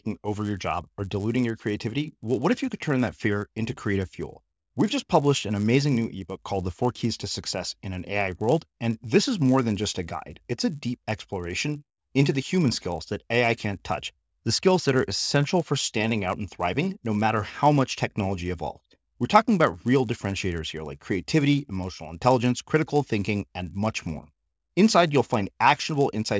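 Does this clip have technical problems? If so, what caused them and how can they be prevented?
Yes. A resampler restarted on every block runs through the whole clip, heard as a 100 Hz buzz riding on the speech and only present with signal. Each 10 ms block was converted from 48 kHz to 16 kHz in isolation, so the filter lacked real neighbouring samples at every edge and left a small error there. Prevent it by using a streaming resampler that carries its filter state across block boundaries.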